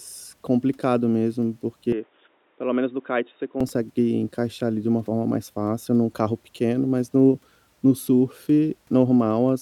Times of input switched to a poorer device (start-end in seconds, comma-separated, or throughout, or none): 1.92-3.60